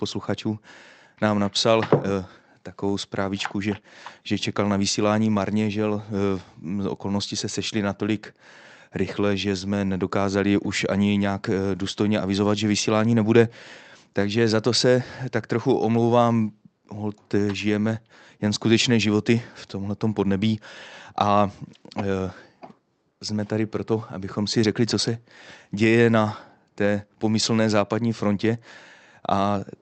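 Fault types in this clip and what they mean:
No faults found in this speech recording.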